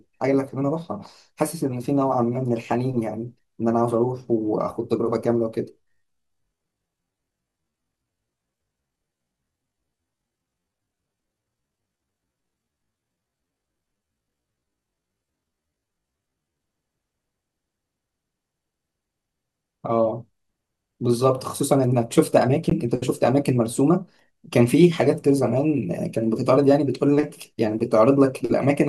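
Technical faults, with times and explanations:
5.78 to 16.60 s, time-stretched section: the pace abruptly drops to half speed while the pitch stays where it was. That pairing points to software stretching, most likely to fit the passage to a longer slot. To keep the pitch steady, it repeats short slices of the waveform to fill the extra time. The slowed passage drags until normal pace returns at 16.60 s.
22.70 s, gap at a join of encoded pieces: a 17 ms silence cuts into otherwise continuous speech, with its edges smeared by the codec. This fits two separately encoded pieces joined without trimming. The first encoder's padded final frame and the next encoder's start-up delay both remain in the audio as a brief dropout. The sound then resumes exactly where it stopped, with nothing missing.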